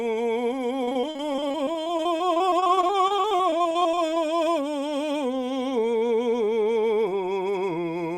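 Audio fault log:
0.83–4.18 s, repeated packet loss (robotic sound): the music breaks up into several dozen short holes, none longer than about 37 ms, arriving in quick succession across the span. Each hole is bridged by extending the last stretch of audio. About 774 ms of roughly 880 ms lost is patched this way, nearly a quarter of the span. The stacked repeats give a choppy texture with fragments missing.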